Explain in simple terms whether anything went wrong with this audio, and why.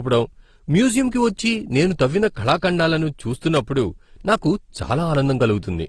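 Two things went wrong. First, the whole clip sounds dull, with nothing above 12 kHz. It also carries a mix of different artefacts heard together. This is likely transcoding between lossy codecs. The audio seems to have been compressed in one format, then compressed again in another, such as AAC followed by Opus. Each pass added its own damage.

Second, at 3.56 s there is a sharp snap. It is over in a split second. It sits on top of the speech rather than cutting it out. This is an electrical switching spike, likely from a nearby switch, motor or static spark that the audio line picked up.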